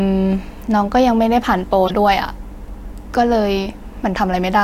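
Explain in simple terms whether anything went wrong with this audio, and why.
Something did go wrong, briefly. Between about 1.87 and 1.91 seconds the speech is interrupted by a short, loud blip, and that's a corrupt frame decoded. Part of the compressed data got damaged, and instead of skipping the broken bits, the decoder played them anyway. Garbled instructions put sound at the wrong pitches for a couple of frames, so you hear a quick squeak or burst of noise that doesn't belong to the speech.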